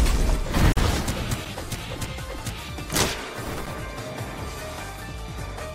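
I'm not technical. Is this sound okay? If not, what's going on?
No. The audio was encoded in separate pieces that were then joined end to end without trimming the extra silence each encoding run adds at its start and end. The result is a gap at a join of encoded pieces: at 0.72 to 0.77 s the sound abruptly drops out for about 45 milliseconds, a brief hole with softened edges, and then picks up again exactly where it stopped.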